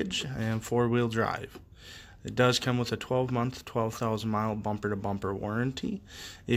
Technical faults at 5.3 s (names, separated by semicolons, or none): clock slip clicks